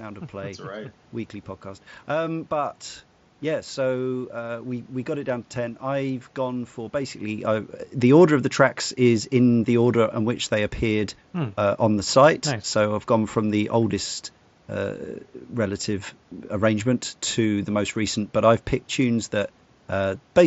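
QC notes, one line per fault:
No faults to note for QC.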